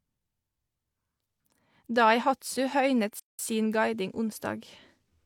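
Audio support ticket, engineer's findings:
Playback stall, 3.19 to 3.39 s: speech cuts to silence mid-flow for about 196 ms, then carries on. Looks like the player's buffer ran dry or its audio thread got blocked, so nothing reached the output until it caught up. Likely cause is an underrun upstream of the output device rather than anything in the recording itself. Worth checking buffer headroom and thread priority on the playback side.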